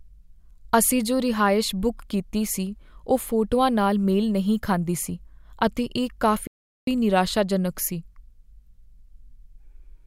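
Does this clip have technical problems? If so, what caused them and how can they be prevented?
Yes. A playback stall occurs from 6.47 to 6.87 s: the speech cuts to silence for about 0.4 s, then resumes. The player likely ran dry of buffered data or had its audio thread blocked. A larger playback buffer and a higher-priority audio thread would prevent it.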